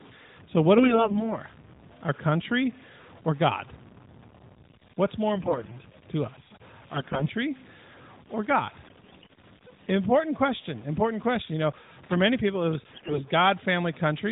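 Low bit depth without dither runs through the whole clip. Quiet passages of the speech sound gritty, with grainy distortion riding on the signal roughly 25 dB below it. The likely cause is truncation to about 7 bits with no dither, so the rounding error follows the waveform instead of forming neutral hiss.

AMR bit errors occur at 0.78–1.36 s, at 5.34–5.76 s just before "to us", at 6.94–7.29 s just after "to us", at 8.82–9.33 s, and at 12.92–13.23 s. In each stretch the voice keeps its pitch and level but turns hoarse, scratchy and gargly. Flipped low-priority bits in the mobile frames displace the excitation pulses and corrupt the finer gain and spectral values. The stretch at 12.92 s carried the densest errors.

Loose connector crackle comes at 12.03–12.14 s, just before "many people it was". It is an irregular burst of crackle where a worn or dirty contact made and broke rapidly, chopping the signal. 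Underneath all of this, the AMR narrowband mobile codec passes nothing above 4 kHz.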